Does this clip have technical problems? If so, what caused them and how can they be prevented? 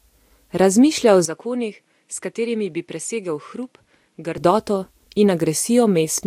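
Yes. An input switched to a poorer device runs from 1.25 s to 4.38 s. Over that stretch the speech loses everything above 11.6 kHz and turns duller, drops by roughly 10 dB, and carries a new noise floor around 45 dB down, with no gap at either switch. The likely cause is the recording system swapping to a different microphone and then back. Locking the input device in the operating system and the recording application prevents this.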